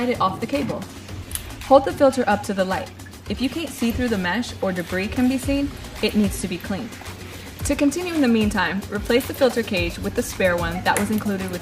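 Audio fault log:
No faults heard.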